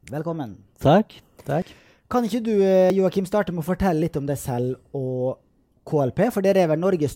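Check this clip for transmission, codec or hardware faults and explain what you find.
Three short skips in this speech point to a likely dropped buffer (overrun) each time: the recording software fell behind, the hardware wrote fresh samples over a block that hadn't been collected, and the surviving audio on either side was spliced together with no gap. At 1.62 s and 2.90 s roughly 20 ms of sound goes missing, and at 4.02 s around 30 ms. Each is heard as the sound jumping abruptly forward.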